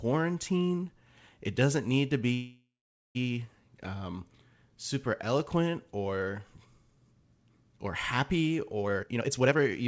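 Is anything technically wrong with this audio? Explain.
Yes. From 2.34 to 3.17 s, packets were likely held up and the jitter buffer ran dry, producing a call audio freeze: the last sound stretches into a fading buzz or hiss, then about 0.44 s of silence, before speech resumes where it stopped. From 8.82 to 9.82 s, a jitter buffer speed-up trims roughly half a second of pitch periods, so the speech runs hurried at 157% speed with unchanged pitch. Band-limiting to 8 kHz throughout fits the G.722 call path.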